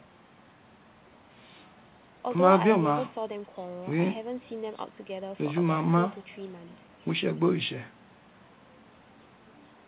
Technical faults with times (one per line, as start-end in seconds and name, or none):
none